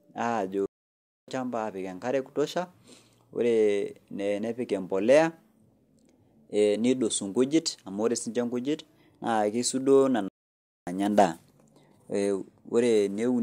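At 0.66 s the speech cuts out dead for about 0.62 s, resuming at 1.28 s, and the same happens again from 10.28 s to 10.87 s, about 0.58 s. Each is a playback stall, likely the player starving for data or its thread being blocked, so output simply falls silent mid-flow. On a waveform each shows as a flat silent gap; on a spectrogram, a clean blank vertical band across all frequencies.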